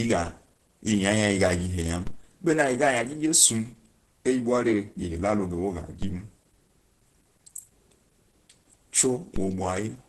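The speech sounds muffled and hoarse from start to finish, with a grainy roughness over every syllable. Nothing is heard above about 12.1 kHz. The likely cause is heavy Opus compression in its hybrid speech mode. This mode codes the low band as speech and the top band only roughly. The degree of damage points to a very low bitrate, near 12 kbps. Bands are filled with noise instead of detail, so tone turns coarse.

A DC step comes at 2.07 s. The waveform's zero line suddenly jumps to an offset, which gives a low thump. The offset holds until 6.02 s. Then it steps back, with a second thump. Another DC step arrives at 9.36 s and lasts to the end. Each jump is a dull knock under the speech. The speech itself carries on unchanged.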